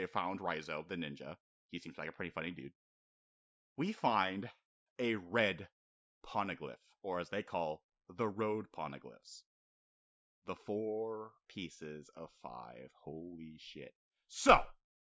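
No technical faults can be heard anywhere in this recording; the signal stays continuous and steady in level throughout.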